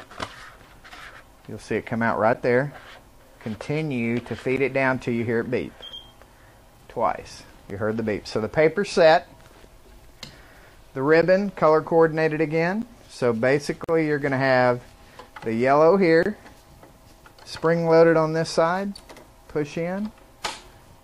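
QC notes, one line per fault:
2.33, 4.56, 7.70, 11.22 and 12.82 s: block of digital silence. Abrupt dropouts of about 12 ms (8.5 ms at 7.70 s), which fits missed output buffers (512 samples at four of them).
13.84–13.89 s and 16.23–16.26 s: gap at a join of encoded pieces. Silences of 45 ms and 28 ms, smeared at the edges, from untrimmed encoder delay and padding where the pieces were joined. The sound resumes where it stopped.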